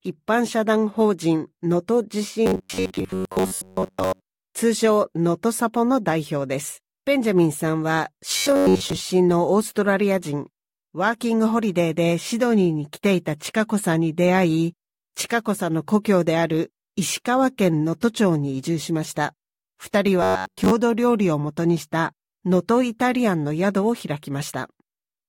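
Robotic sound from repeated short buffers appears at 2.46 to 4.25 s, 8.37 to 9.00 s and 20.22 to 20.73 s. In each stretch the sound collapses into a rigid, metallic buzz at 93.8 Hz that still loosely tracks the underlying audio. The likely cause is incoming audio arriving too seldom, so playback loops a segment of about 10.7 ms for most of each stretch while the real material is skipped, imposing that fixed pitch.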